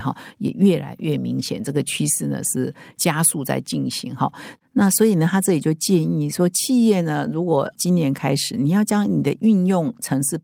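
No technical faults are audible.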